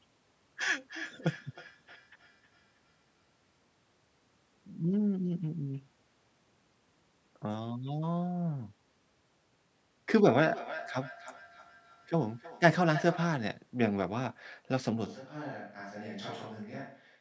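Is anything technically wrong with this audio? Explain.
Yes. From 0.79 to 3.57 s and again from 10.25 to 13.42 s, each word returns roughly every 300 ms, thinner and ringing, peaking about 19 dB and then about 12 dB below the speech. This is feedback echo between two devices: one device plays the other's microphone signal back into that microphone, beyond either echo canceller's reach.

At 15.07 s the sound abruptly turns roomy and hollow, dropping roughly 10 dB with room noise near 35 dB below speech until the end, likely a switch to a distant microphone.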